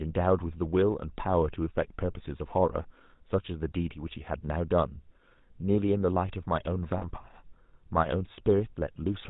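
From start to finish the speech carries the plainly audible damage of the GSM full-rate codec, which fits the roughly 13 kbps first-generation mobile coder. It rebuilds the voice from a vocal-tract model fed with evenly spaced pulses, keeping only a third of the excitation samples, so voices come out buzzy and gravelly. On a spectrogram, energy stops sharply at 4 kHz, and harmonics look smeared and grainy rather than cleanly striated.

From 6.98 to 7.06 s there are lost GSM frames, a gap of about 40 ms that fits two dropped frames. The decoder covers the hole by reusing the last good frame's settings, so the sound briefly hangs on as a rough, metallic ring instead of going on naturally. A spectrogram shows a short stretch of repeated, flattened spectral pattern.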